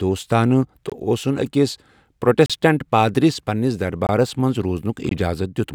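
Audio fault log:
0.90–0.92 s, 4.07–4.09 s, 5.09–5.11 s: block of digital silence. The signal drops to zeros for about 21 ms each time, which fits a 1024-sample buffer the program failed to fill in time. The cut in and out has no fade, so each is heard as a short hole.
2.46–2.50 s: block of digital silence, about 36 ms long, heard as a short hole.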